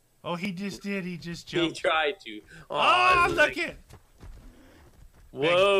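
At 0.45 s there is a small jump in the sound. Nothing goes silent. The audio simply skips forward by a tiny slice, roughly a millisecond or two, and the two sides meet with no gap. This is likely a dropped buffer (overrun). The program did not read its samples in time, the hardware wrote over them, and that short piece was lost.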